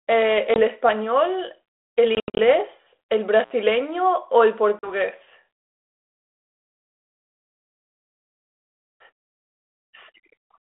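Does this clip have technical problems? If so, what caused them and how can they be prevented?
Yes. The speech has packet loss on an ADPCM call at 0.54 s (a 20 ms hole), from 2.15 to 2.39 s (about 170 ms of gaps scattered over 240 ms, the longest 80 ms), and from 4.79 to 4.92 s (40 ms missing). Each gap is clean digital silence with hard edges. After each gap, the sound returns slightly distorted. This happens because the decoder's adaptive predictor and step size have lost track of the sender's and need some tens of milliseconds to resynchronise. Unlike a contact fault, these holes carry no crackle or hiss. Using packet loss concealment and a jitter buffer, and resetting the decoder state after a loss, would prevent this.

An intermittent contact opens from 3.40 to 3.52 s, cutting the sound for about 65 ms. Crackle at both edges and faint hiss during the dropout set it apart from the silent, hard-edged packet gaps. 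A firmly seated, undamaged cable or plug would prevent this.

The narrow 300 Hz to 3.5 kHz line band and light codec texture fit 32 kbit/s G.726 ADPCM.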